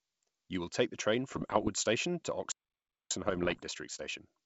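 From 1.29 to 1.70 s the speech breaks into pops and rough, gritty bursts, with the level jumping briefly up and down. These are bit errors on an ADPCM link at a rate of about 1 percent. Each flipped bit throws the decoder's step size and predictor off, so the damage rings on for a few milliseconds. On a spectrogram this shows as scattered broadband vertical streaks. The waveform has sudden spikes and short swollen or shrunken stretches.

At 2.52 s the sound stops dead in mid-flow for about 0.59 s, until 3.11 s. This is a playback stall. The player was likely starved of data or had its thread blocked. The waveform is flat through the gap, and the spectrogram is an empty vertical band with hard edges on both sides.

From 3.11 s to the end the speech is hurried at 1.15 times normal speed with its pitch unchanged. This time-compressed catch-up shrinks the backlog left by the stall by cutting small pieces out and cross-fading across the joins. 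Syllables sit closer together in the waveform, and the harmonic lines in the spectrogram show small discontinuities at the splices.

Within that hurried stretch, from 3.29 to 3.61 s, ADPCM bit errors return at a rate of under 1 percent. The pops and rough bursts are again broadband streaks with brief level jumps, standing out against the wideband G.722 speech that reaches up to 7 kHz.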